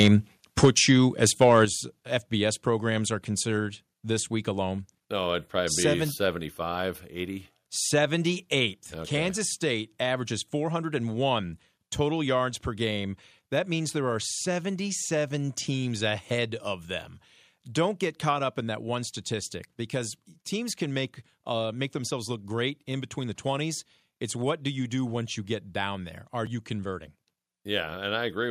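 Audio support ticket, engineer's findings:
Microphone overload, likely input gain set too high at the converter. Speech peaks driven about 5, 7 and 3 dB past full scale at 0.00–0.15 s, 0.63–0.91 s and 1.24–1.63 s, a few percent of samples flattened. Harsh crackle on loudest syllables.

Microphone volume stepped down, likely the call software's automatic gain cutting device input after detecting clipping. Single-step drops at 0.65 s (about 4 dB), 1.65 s (about 7 dB), 8.79 s (about 2 dB). Speech and background fall together abruptly, the first two right after distorted peaks.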